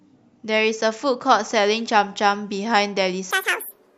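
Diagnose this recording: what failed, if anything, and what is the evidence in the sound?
From 3.31 s to the end at 3.98 s the speech abruptly races at double speed and jumps an octave up. This is audio read two samples at a time in sample-format conversion, where the reader mistakes pairs of samples for single frames, folding high frequencies back down.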